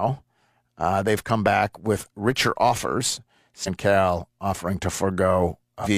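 At 3.63 s, right after "back with richer offers", a brief glitch lasting about 50 ms breaks into the speech, and a second one runs from 5.81 to 5.87 s. Both are damaged data in a compressed stream: a stretch of the encoded bitstream is corrupted, so the decoder misreads those frames, loses frame sync and hunts for the next valid header, producing a short glitch or hole instead of the intended audio.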